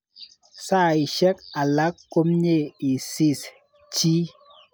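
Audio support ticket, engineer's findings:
Listened through the speech recording and nothing stood out; no findings to log.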